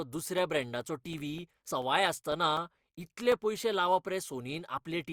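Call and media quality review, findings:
Compressed frames skipped: decoder dropped missing or damaged 20 ms frames, so the sound jumps ahead, around 70 ms at 1.67–1.70 s and one frame's worth at 4.77 s.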